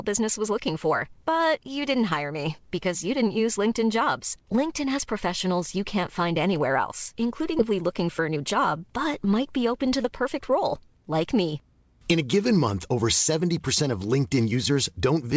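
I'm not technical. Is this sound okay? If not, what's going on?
No. At 7.59 s, right after "find anywhere else including", the speech suddenly jumps forward, and roughly three quarters of a second of talking is simply gone. This is a skip ahead: a chunk of audio was dropped, either on the way or by the call system while it held audio to catch up, and the two sides of the gap were stitched together with no pause.

Just after that, from 8.19 to 8.77 s, leading into "but might be open", the talking runs about 6% fast and sounds a little rushed, though the pitch stays the same. This is a jitter buffer speed-up: the call's holding area had more audio stored than it wanted, so it snipped out many tiny slivers, totalling only a few hundredths of a second, to reduce the delay.

The whole clip also went through an ordinary G.722 call connection, which keeps nothing above 8 kHz.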